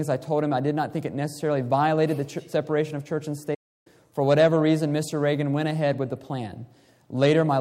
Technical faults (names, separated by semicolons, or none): playback stall